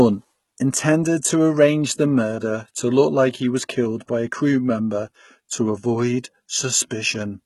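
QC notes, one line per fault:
Throughout: HE-AAC compression. The speech was likely squeezed through HE-AAC at a very low rate, consistent with about 16 kbps, so only the lower band is truly coded and the treble is rebuilt from copied lower bands, leaving sibilants gritty, lispy and metallic.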